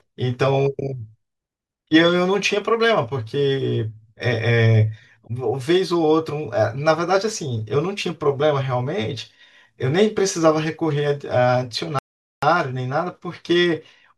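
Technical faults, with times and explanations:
11.99 to 12.43 s, playback stall: the speech cuts out mid-flow for about 440 ms, then picks up again, most likely the player running dry on data.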